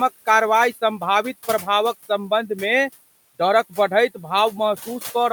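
Noise suppressor artifacts run through the whole clip. The suppressor judges, frame by frame, which frequency bands hold steady background and pulls those bands down by about 15 dB. The room noise sits about 19 dB below the speech, so in the gaps between words it is cut hard and the background drops away. As speech returns, the suppressor opens those bands again and the noise swells back underneath, giving a pumping rise and fall that tracks the talker.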